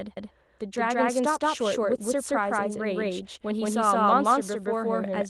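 Right from the start and for the whole clip, the speech carries a channel delay (doubling): one side of the stereo pair is running about 171 ms behind the other, which fits a 4096-sample buffer, and once the two get folded to mono you hear every syllable twice at equal level, like a flat slap echo trailing the original. The Opus voice compression underneath sounds light, with full bandwidth kept.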